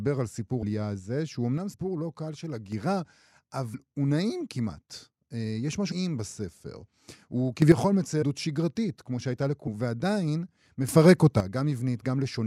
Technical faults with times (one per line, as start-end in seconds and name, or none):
0.62 compressed frames skipped
1.58-2.72 sudden gain jump
1.73 compressed frames skipped
3.73 compressed frames skipped
5.91 compressed frames skipped
7.62-7.72 sudden gain jump
8.21 compressed frames skipped
9.66 compressed frames skipped
10.89-11.40 sudden gain jump